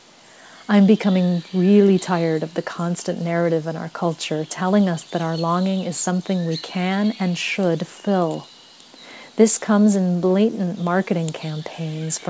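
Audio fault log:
No faults turn up here, just the ordinary sound of a call path, with nothing above 8 kHz, which fits a wideband G.722 link at around 64 kbps.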